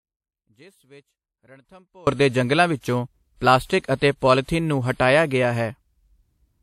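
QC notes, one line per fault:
throughout: transcoding between lossy codecs. The speech likely passed through MP3 at 64 kbit/s and was then re-encoded as WMA 1 at 64 kbit/s. The second encoder spends part of its budget on the artefacts the first left behind, then adds its own. The two kinds of degradation sit together. The lowest band limit in the chain survives, leaving nothing above 16.4 kHz.
0.00–2.07 s: audio dropout to a faint residue. The wanted signal is already missing when the clip starts, most likely lost upstream while the path after the break stayed live. Instead of silence, the gap carries only a faint leak of the sound, roughly 30 dB below its normal level. At 2.07 s the speech snaps back to full level with "ਦੇ ਜੰਗਲਾਂ ਵਿੱਚੋਂ ਪਲਾਸਟਿਕ". The return is an abrupt jump rather than a fade-in or a natural pause.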